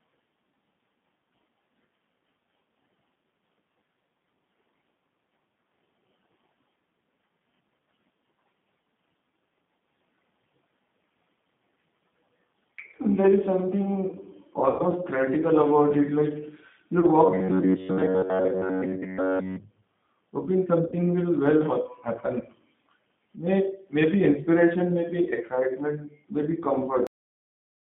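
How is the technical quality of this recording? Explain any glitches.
The recording is narrowband and coded, with three concealed dropouts and an abrupt ending.

Throughout, the speech sounds slightly rough and synthetic within a 150 Hz to 3.6 kHz band, which points to the G.729 codec at 8 kbit/s rebuilding each frame from a filter and a few pulses.

At 14.70 s, 17.00 s and 20.86 s, the sound smears into a fading buzz or coloured noise for about 90, 30 and 60 ms. This is VoIP packet loss concealed by the speech codec, which extrapolated from its last frame.

At 27.07 s, the audio stops mid-sound and drops straight to digital silence. This is a cut-off end: the final buffers were never played out.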